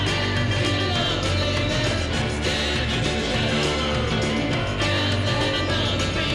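Throughout, the resampler restarts on every block. Each 20 ms block is converted alone. Its edge errors form a 50 Hz buzz under the sound.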